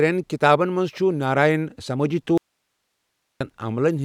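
Speech, with an audio dropout to a faint residue from 2.38 s to 3.41 s: the signal cuts out abruptly for about 1.03 s, leaving only hiss roughly 55 dB below the speech level. The abrupt edges and the live noise floor point to a likely brief loss of the source upstream of a path that stayed active.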